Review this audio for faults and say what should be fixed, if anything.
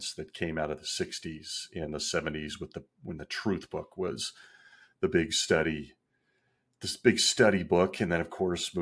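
Nothing needs fixing, as the speech signal comes through steady and intact, with no dropouts, glitches or level problems to be heard at any point.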